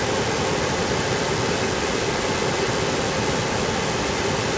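From 0.0 to 4.58 s, the speech is followed by a second copy 334 ms later, about as loud as the original. This is an echo leak, likely from a loudspeaker end whose echo canceller failed to remove its microphone pickup.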